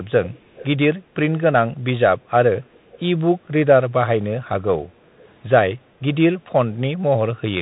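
From the start the speech sounds muffled and gritty, with scratchy s sounds and a granular hiss; this is the Bluetooth CVSD headset codec, which fits a 64 kbit/s link, stripping everything above 3.8 kHz. From 0.24 to 0.67 s, and again more faintly from 2.73 to 2.99 s, a quiet delayed copy trails the speech by 246 ms, likely an echo leak from a loudspeaker whose echo canceller let some of the sound through.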